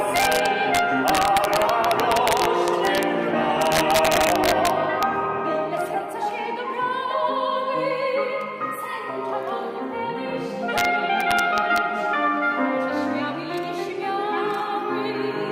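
Violent cracks hit the loud peaks from 0.16 to 3.03 s, 3.62 to 5.03 s, 10.78 to 10.85 s, and 11.21 to 11.78 s. This is integer overflow: peaks pushed about 1 to 3 dB past full scale wrap to the opposite sign instead of being limited.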